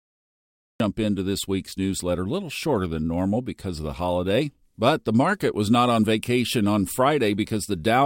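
The capture or stream started late, so the opening of the speech was never recorded, which gives a cut-off start. The first 0.80 s is digital silence, and at 0.80 s the audio jumps straight in partway through a sound, just before "into this week's newsletter". There is no natural attack or fade-in. The talker seems to be caught mid-utterance, with the beginning of the phrase missing.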